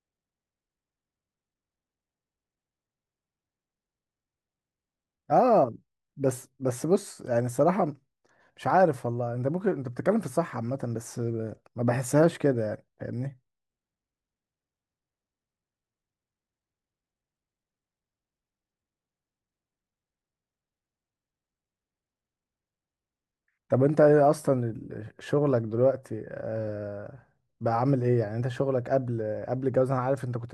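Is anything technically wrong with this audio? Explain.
No, nothing technically wrong stood out on listening to this speech recording.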